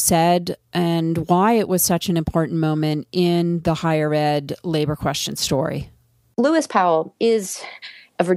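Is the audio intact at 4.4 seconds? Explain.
Yes, the speech at 4.4 s plays through cleanly with no audible fault.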